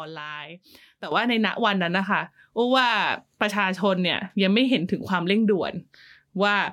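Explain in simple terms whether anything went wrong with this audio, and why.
At 1.12 seconds the speech and its background hiss suddenly get much louder together, and stay that way. This sudden gain jump likely comes from a volume setting applied instantly instead of gradually.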